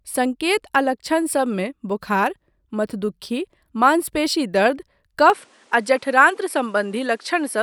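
At 5.30 s the speech abruptly loses everything above 11.4 kHz and stays dulled to the end, with faint new background noise around 35 dB below it. The cause is likely an input switched to a poorer device. Unlike a plain filter change, it brings its own noise floor, with no gap and no level jump.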